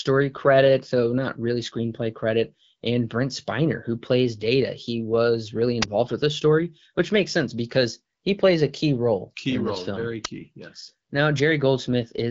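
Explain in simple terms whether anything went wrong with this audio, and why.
Two brief cracks, at 5.82 s just after "he was really" and at 10.25 s just after "role very", are an uninitialised buffer: leftover memory was played as sound, so you hear a crack rather than a silent gap. The phone-style HD Voice codec is working as intended.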